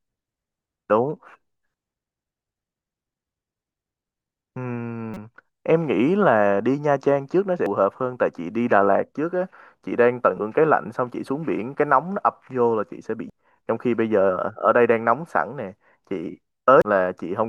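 Short chirps and blips break into the speech five times: a longer squawk from 5.14 to 5.17 s, a brief click-like blip at 7.66 s, another squawk from 10.35 to 10.39 s, then quick blips at 13.30 s and 16.82 s. Each is damaged data in a compressed stream. Corrupted bytes garble those frames, so the decoder outputs nonsense before regaining sync at the next valid frame.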